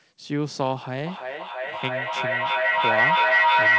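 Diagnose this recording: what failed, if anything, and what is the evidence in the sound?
Feedback echo between two devices, a room loop that neither echo canceller covers: from 1.06 s, speech recurs roughly every 0.3 s, building to about 8 dB above itself rather than fading like single echo.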